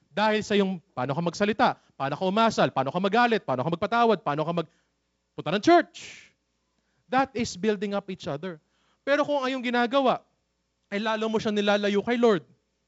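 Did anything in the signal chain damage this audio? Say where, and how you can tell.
No, the chain shows no damage: the speech sits in a G.722 wideband telephone path, apparently at 56 kbit/s, with nothing above about 7.7 kHz and only the light coding grain that path leaves in the bands.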